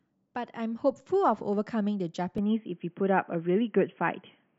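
At 2.38 s the speech abruptly turns dull and boxy and stays that way to the end, with no gap at the changeover. The likely cause is an input switched to a poorer device, a narrower-band microphone path. On a spectrogram everything above 3.3 kHz vanishes from that instant, leaving a flat ceiling. The waveform shows a level step of roughly 5 dB, and a faint new noise floor sits far below the speech.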